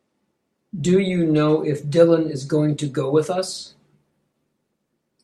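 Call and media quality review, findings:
No faults found in this speech recording.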